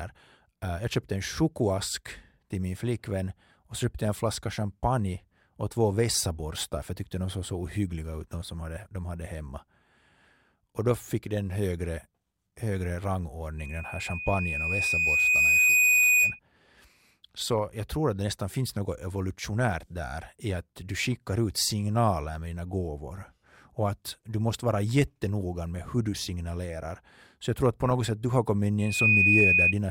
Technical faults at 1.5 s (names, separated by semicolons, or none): none